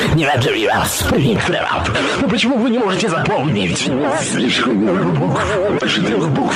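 At 1.36 s the sound gets duller and stays that way to the end. Everything above about 10.5 kHz is gone, and a new layer of background noise appears, sitting about 40 dB under the signal. There's no gap at the changeover and the overall level hardly shifts. The likely cause is an input switched to a poorer device partway through, one with a narrower band and a noise floor of its own.

Then from 5.75 to 5.83 s there's a short glitch. That's damaged data in a compressed stream. Some of the encoded frames there were corrupted, so the decoder couldn't make sense of them, lost its footing and skipped forward to the next clean frame header to pick up again, leaving that brief glitch.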